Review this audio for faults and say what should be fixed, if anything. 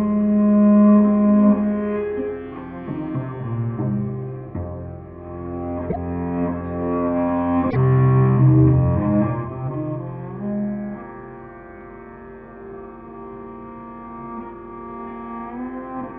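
Broken MP3 bit reservoir at 5.89 and 7.69 s: the audio skips through a 70 ms chirp, noise burst or short gap, likely because removed frames left the following 26.1 ms frames borrowing the wrong bytes.

To prevent it, decode before cutting or splicing and re-encode afterwards, so no frame is dropped while later frames still depend on its reservoir data.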